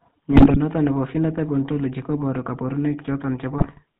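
From start to finish the speech carries GSM full-rate codec damage, consistent with the 13 kbps full-rate coder. The regular-pulse excitation model gives a buzzy, gravelly texture, and nothing above 4 kHz survives, so the voice sounds narrow and rasping.

GSM bit errors appear twice, from 0.32 to 0.57 s and from 3.58 to 3.81 s. Corrupted filter, pitch and gain parameters reach the decoder, so frames come out with bent spectra and jumping levels, heard as squawks, pops and gargling across each quarter-second burst.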